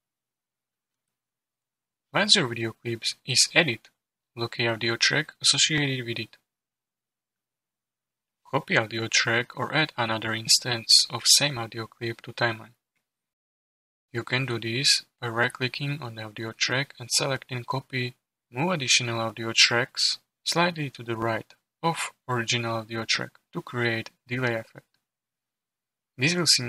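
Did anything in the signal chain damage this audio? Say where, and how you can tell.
Yes: mismatched clocks at the driver or buffer stage likely caused clock drift buffer slips, audible as clicks every 1.93 s from 1.92 to 25.09 s.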